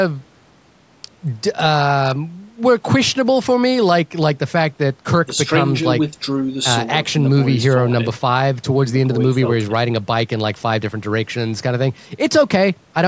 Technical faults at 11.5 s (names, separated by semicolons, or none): none